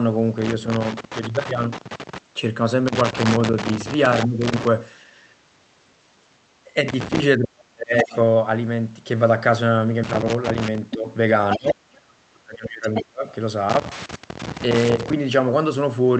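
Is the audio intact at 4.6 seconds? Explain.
No. A loose connector crackle runs from 2.87 to 4.67 s, covering that moment. A worn contact keeps making and breaking as it shifts. This chops the signal, and any DC on the line adds pops. It is heard as an irregular scratchy crackle.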